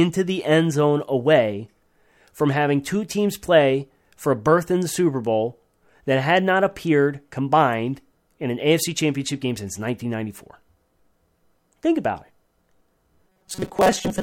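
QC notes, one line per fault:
13.28–14.23 s, robotic sound from repeated short buffers: the speech turns into a rigid metallic buzz fixed near 188 Hz that loosely tracks the syllables. The likely cause is late-arriving audio, with about half the signal replaced by a looped segment of about 5.3 ms.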